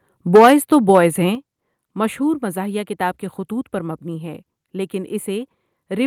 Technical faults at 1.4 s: channel delay (comb filtering); microphone volume stepped down

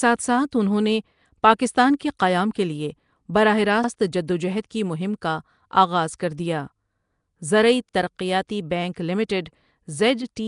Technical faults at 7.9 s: Nellymoser compression; overlapping chunks

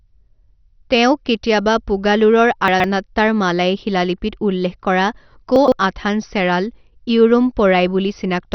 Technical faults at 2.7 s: MP2 compression; chunks out of order

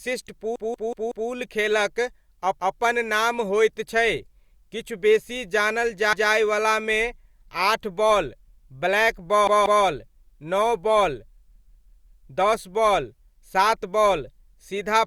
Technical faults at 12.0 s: repeated buffer

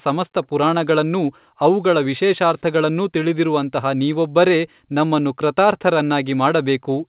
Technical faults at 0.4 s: none

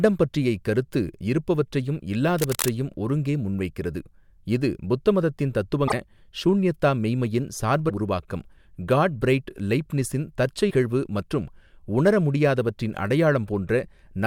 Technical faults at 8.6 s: none

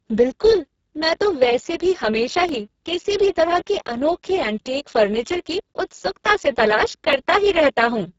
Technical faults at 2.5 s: Speex codec; repeated buffer

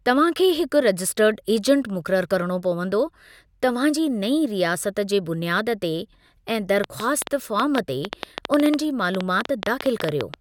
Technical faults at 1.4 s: none

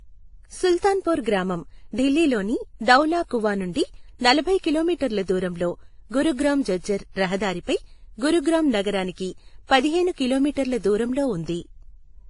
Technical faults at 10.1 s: transcoding between lossy codecs

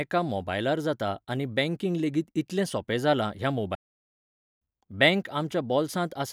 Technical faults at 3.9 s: playback stall

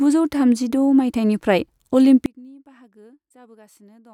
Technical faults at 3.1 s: one channel inverted

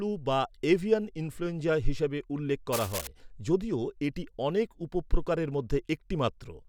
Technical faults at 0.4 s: none

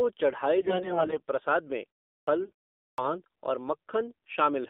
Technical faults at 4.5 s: AMR narrowband mobile codec

